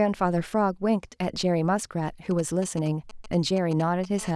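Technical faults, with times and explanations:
2.31 to 4.20 s, GSM signalling bursts: a nearby 2G phone sends short groups of radio pulses while signalling, and the audio circuit rectifies them into a galloping dit-dit-dit of brief 217 Hz buzzes, roughly 15 dB below the speech. A spectrogram shows clustered vertical stripes with harmonic combs. The waveform shows spiky packets.
4.21 to 4.31 s, GSM phone buzz: the phone bursts steadily at 217 times a second, as in a call, and the rectified pulses give a hard, raspy buzz about 18 dB below the speech. On a spectrogram it forms a dense ladder of 217 Hz harmonics. The waveform shows a regular pulse train.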